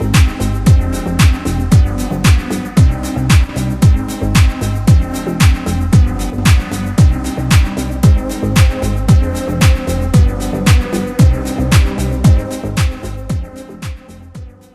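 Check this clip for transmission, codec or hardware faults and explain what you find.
Two brief dips point to one channel dropping out. They fall at 3.44–3.49 s and 6.30–6.38 s. The level drops abruptly by about 6 dB, then snaps back. The likely cause is one stereo channel briefly going silent before the mono sum, halving the shared signal.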